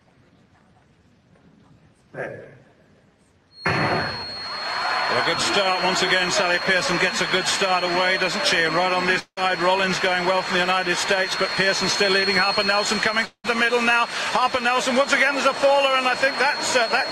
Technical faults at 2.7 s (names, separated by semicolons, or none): none